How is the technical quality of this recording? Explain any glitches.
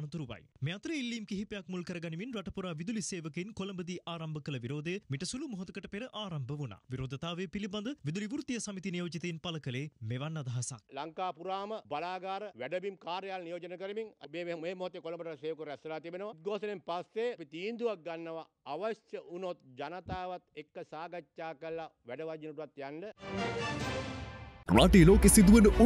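No technical faults can be heard anywhere in the recording, so there are no glitches to explain.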